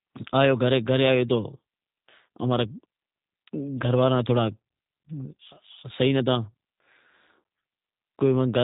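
From start to finish, the speech carries G.729 codec damage, and it is plainly audible. Nothing above about 3.8 kHz survives. The voice is rebuilt from a filter, a pitch predictor and sparse pulses. It sounds rough and synthetic, which fits an 8 kbit/s G.729A stream.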